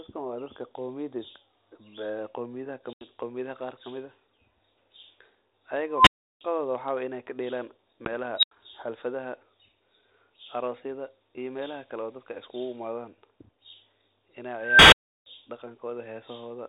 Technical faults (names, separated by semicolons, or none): packet loss on an ADPCM call; unstable filter